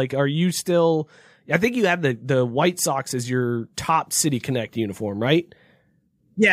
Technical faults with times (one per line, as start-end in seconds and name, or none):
none